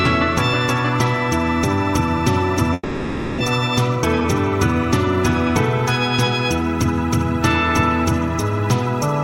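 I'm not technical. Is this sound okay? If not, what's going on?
No. From 2.73 to 3.42 s the sound trails off into a fading buzz or hiss, drops to near silence, and then comes back with a chunk missing, about 0.4 s of it never heard. This is a long network dropout. The connection likely stopped delivering audio for a moment, so the playback filled the gap with a fading imitation of the last sound before giving up. When audio resumed it skipped ahead rather than replaying what was lost.

Shortly after, from 3.96 to 4.25 s, the sound briefly rushes, playing about 38% faster than normal without going higher in pitch, so it comes across as hurried. This is a jitter buffer speed-up. After the interruption, delayed audio piled up at the receiver. To catch back up, the player snipped out many tiny slices, roughly a tenth of a second in total, and squeezed the rest together.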